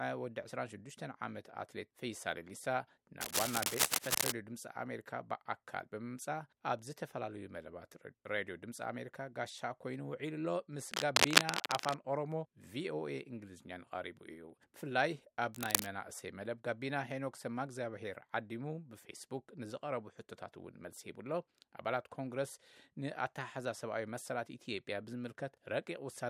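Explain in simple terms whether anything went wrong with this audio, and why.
A worn cable or connector was likely being moved, causing cable scratch noise: scratching bursts, louder than the sound itself, at 3.2 to 4.3 s, 10.9 to 12.0 s, and 15.53 to 15.87 s.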